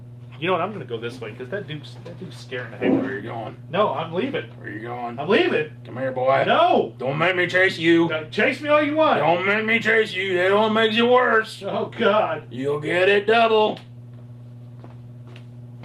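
No technical faults can be heard anywhere in this clip.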